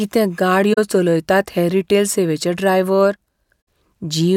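Around 0.73 to 0.78 s the speech drops into a soft-edged hole, and that's AAC frame loss with muting. The decoder zeroed the spectrum of the missing data, so the overlapping windows fade the sound out and back in rather than cutting it. The gap fits roughly two lost frames, about 43 ms. The same thing happens again at 3.66 s, this time pointing to three frames, about 64 ms.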